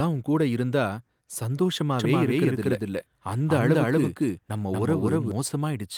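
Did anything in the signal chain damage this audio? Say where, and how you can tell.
Yes. A doubled audio track runs from 1.99 s to 5.31 s. The speech repeats about a fifth of a second late, at roughly equal level, with no decay or room colour. It starts and stops abruptly. A second, slower capture path in the driver or buffer routing is the likely cause.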